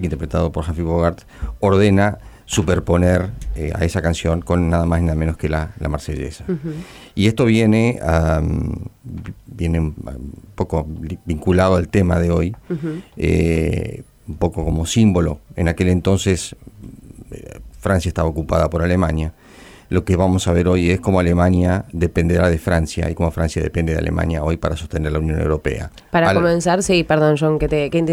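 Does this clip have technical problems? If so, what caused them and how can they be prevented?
No, there's nothing technically wrong to pick out here, so there's no cause to trace and nothing that needs preventing.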